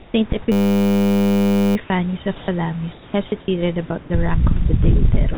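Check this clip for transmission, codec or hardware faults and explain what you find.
Two faults are audible: the sound is chopped by what is likely a voice detector, and a short system hang loop buzzes from about half a second to nearly two seconds in.

From 0.0 to 4.1 s, just before "the rank of the", about 720 ms of sound drops into flat synthetic hiss, and the final 5.34 to 5.38 s does the same. This is likely voice-activity gating swapping real audio for comfort noise.

From 0.52 to 1.76 s a steady 100 Hz buzz replaces the sound. It comes from a system hang, where a single 10 ms buffer replayed over a hundred times while the hardware kept cycling.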